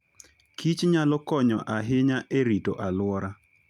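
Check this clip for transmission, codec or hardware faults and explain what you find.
No transmission, codec or hardware faults.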